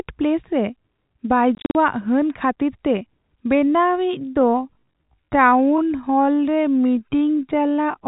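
Between 1.55 and 1.75 s the receiver lost most of the incoming packets, about 150 ms of audio out of a 200 ms stretch, and played silence in their place. This packet loss filled with silence chops the speech into fragments separated by holes up to 40 ms long. Their sizes fit packets of roughly 10 ms each. Every hole starts and stops abruptly. The 4 kHz ceiling of the G.711 telephone coding is audible throughout, both before and after the gaps.

From 3.51 s to the end, the audio sounds like a time-stretched section. Its likely cause is software lengthening the material to fill a slot while keeping its pitch by repeating short pieces. The speech abruptly slows to about 0.64 times its earlier pace while the pitch stays where it was.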